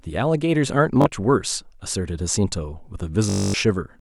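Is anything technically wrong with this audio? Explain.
Yes, there is Bluetooth stutter at 1.02 to 1.06 s and again at 3.30 to 3.54 s. Late or missing wireless packets made the receiver repeat its last short slice of the speech. The first gap is brief, about 40 ms, and sounds like a quick hiccup. The second lasts about 0.24 s, long enough to be heard as a buzzy, machine-gun stutter. In both cases the speech then resumes further on, as if it had kept playing underneath.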